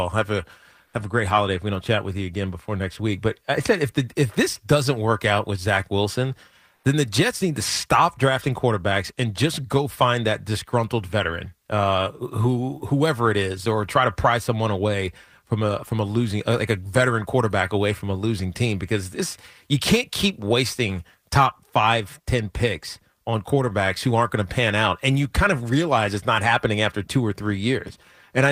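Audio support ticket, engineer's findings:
Comfort noise in place of the background at 0.85–0.93 s and 6.75–6.83 s, 80 ms each. Real background swapped for steady, featureless noise, level shifted about 2 and 3 dB. Likely Opus DTX. Unlike a dropout or noise gate, the gap is filled, not silent.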